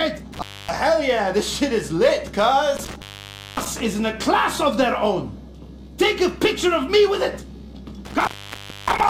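At 0.33, 2.77 and 8.05 s there's intermittent contact: a loose connection opens for about 0.27, 0.56 and 0.6 s, dropping the sound to faint hiss with crackle either side.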